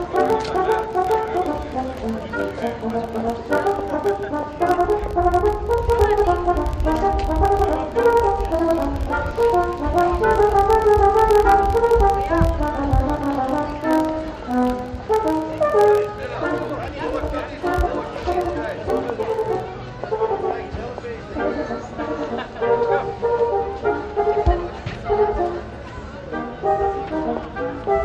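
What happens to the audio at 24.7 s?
Nothing goes wrong at 24.7 s: the sound carries straight through that moment without a dropout, click, glitch or other audible fault.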